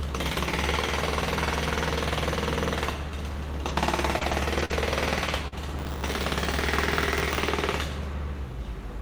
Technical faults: scattered short gaps; buffer tearing

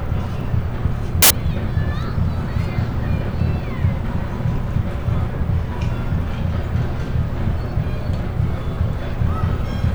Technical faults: samples built from the wrong bytes

